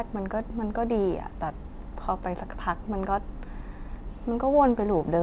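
Nothing goes wrong anywhere in this speech, which has simply come over a call line whose band stops at 4 kHz, just what you'd expect from a G.711 A-law connection.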